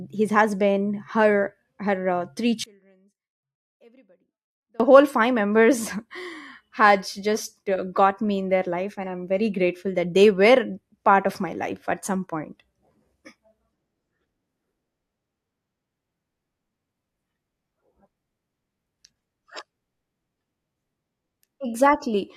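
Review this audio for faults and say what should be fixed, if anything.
From 2.64 to 4.80 s the speech collapses by about 34 dB on mono playback, most likely because one channel was inverted, so the shared centre content cancels when the channels sum. Unlike a true dropout, the level sinks but doesn't reach digital silence. Running a phase-correlation or mono-sum check on every edit and bounce would catch this before delivery.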